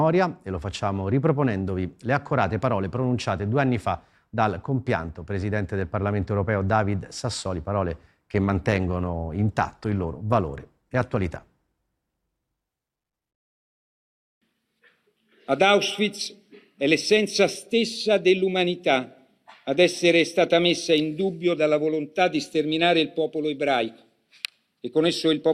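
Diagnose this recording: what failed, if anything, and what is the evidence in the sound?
The fault is a call bitrate drop at the network and codec stage. From 8.3 s to about 12.0 s the sound turns coarse and watery, and the top end dulls, which fits the encoder cutting high frequencies at a low rate. The texture suggests a fall from a high rate to roughly 20 kbps. It holds at its worst for about 3.6 s. The bandwidth estimate collapsed, the encoder was told to spend far fewer bits, and detail returned once the rate recovered.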